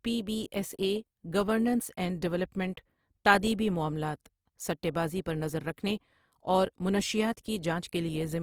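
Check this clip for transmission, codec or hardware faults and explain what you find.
A codec fault runs through the whole clip. Opus compression, likely CELT music mode near 24 kbps, fills starved bands with folded content or noise, so speech sounds grainy and rough despite reaching about 20.4 kHz.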